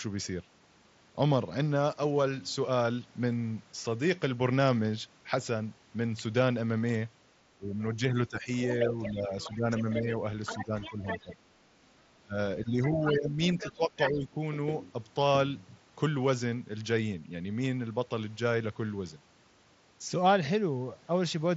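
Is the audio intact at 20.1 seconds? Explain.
Yes, the audio is intact at 20.1 seconds, with no fault at that moment.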